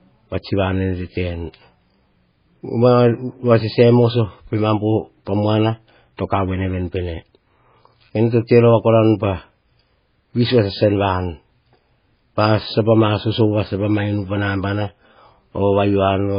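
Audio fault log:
Throughout, MP3 compression: the speech sounds watery and swirly, with nothing above about 5.1 kHz and smeared consonant onsets. This is likely heavy MP3 coding at a very low bitrate, around 16 kbps, cutting treble and letting weak frequency lines flicker between frames.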